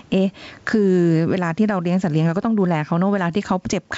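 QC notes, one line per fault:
Throughout: gain pumping. The level moves by roughly 15 dB. Loud and soft passages sit closer together than they should, and the speech sounds squashed. This is likely an input gain set far too high, with a fast limiter or compressor clamping down on each loud moment and releasing in the gaps. The room noise itself sits about 42 dB below the speech, and the G.722 wideband coding, which fits a 64 kbit/s stream, adds no clear damage of its own.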